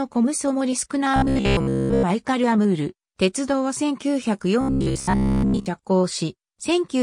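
From 1.16 to 2.05 s and again from 4.61 to 5.66 s, robotic sound from repeated short buffers gives a rigid metallic buzz at 66.8 Hz, likely from a roughly 15 ms block looping over most of the audio. Spectrograms show evenly spaced horizontal harmonics, and waveforms show identical repeating cycles.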